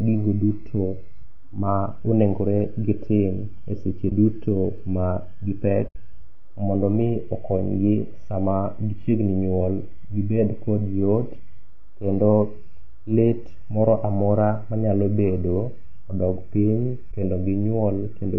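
Throughout the speech there is a rough, grainy texture, with noise filling the gaps between voice harmonics and a top band that sounds thin and synthetic. This is most likely low-delay AAC compression (AAC-ELD), and the plainly audible damage fits a bitrate around 32 kbps. Its short frames cannot separate closely spaced harmonics well. On a spectrogram the harmonic stripes look smeared and speckled, and the highest band looks patchy and artificial.

At 1.20 s, between "gigo duto" and "ma onegore gitim e", a single sharp click is heard. This is likely dropped samples: well under a millisecond of audio is missing, so the waveform jumps abruptly from one value to a later one. No sound is lost, but a spectrogram shows a thin vertical line through every frequency, and the waveform shows a visible step.

From 4.09 to 4.12 s there is a short, soft-edged dropout lasting 20 ms. This is AAC frame loss with muting. 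A frame never arrived, and the decoder replaced its content with silence, so the overlapping windows fade the sound down and back up. On a spectrogram it appears as a narrow blank column with tapered edges, and the waveform's envelope dips smoothly toward zero.

At 4.78 s, after "gitim e seche duto" and before "ma gipek", another click, likely from dropped samples, occurs, with the same thin full-band line and waveform step.

The longest gap, from 5.87 to 5.96 s, is an 80 ms muted hole, which fits four consecutive lost frames. It leaves a break with soft edges and a wider blank band on the spectrogram.

Just after that gap, at 6.07 s, likely dropped samples produce a third sharp click.

From 17.11 to 17.14 s, right after "manyalo bedo odog piny", a final 20 ms frame loss with muting leaves another brief, smoothly faded gap.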